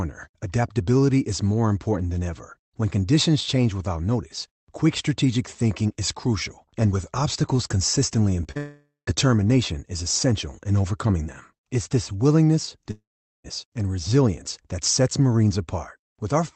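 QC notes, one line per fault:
8.43–8.47 s and 8.51–8.57 s: short concealed packet loss. About 20 ms, then 40 ms, went missing and was patched by extending the preceding sound. This is heard as quick smears, with blurred, smoothed harmonics on the spectrogram.
8.57–9.09 s and 12.91–13.46 s: long network dropout, likely. About 0.5 s each is lost. A fading synthetic tail gives way to silence (about 160 ms, then about 420 ms), which shows as flat gaps in the waveform.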